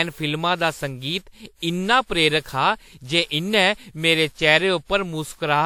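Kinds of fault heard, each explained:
Generation loss: the speech has a swirly, smeared, hollow character with softened consonant attacks, yet the top end still reaches about 20.1 kHz. That points to repeated passes through a lossy codec rather than a single low-bitrate encode, which would usually show a lower cutoff. The likely cause is around seven rounds of decoding and re-encoding, consistent with a WMA-style encoder near 96 kbit/s. Each pass lands on a shifted frame grid, so the quantisation noise and spectral gaps pile up.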